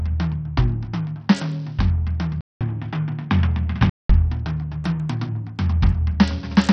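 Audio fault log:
throughout, Bluetooth SBC compression: The music sounds gritty and coarse, with nothing above about 8.8 kHz, so the top end is cut off and any remaining treble flickers. A grainy, rough noise rides on the sound. This is likely SBC coding on a Bluetooth link. The codec splits the signal into a few wide sub-bands and gives bits without any hearing model. The heavy damage fits a low bitrate around 64 kbps, where the upper bands get no bits and the rest are quantised coarsely.
2.41–4.10 s, input switched to a poorer device: The music drops out for about 200 ms and then returns dull and boxy, with nothing above about 3.8 kHz. A faint new noise floor, roughly 45 dB below the music, sits underneath. The loudness stays about the same, and the fuller sound comes back at 4.10 s. This likely comes from the system moving to a narrower-band input, such as another microphone or a headset's call profile, and then switching back.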